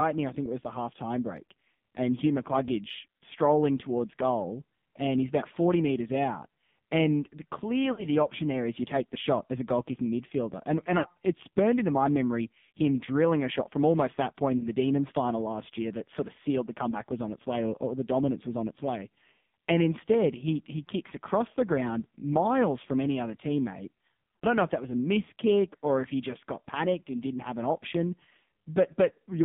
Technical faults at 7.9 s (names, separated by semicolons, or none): AMR narrowband mobile codec; lost AMR speech frames